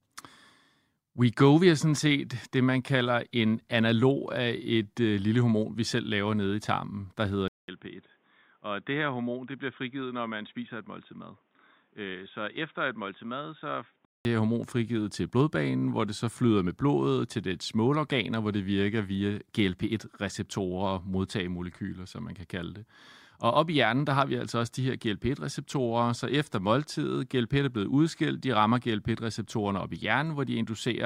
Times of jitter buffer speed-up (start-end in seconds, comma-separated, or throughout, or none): none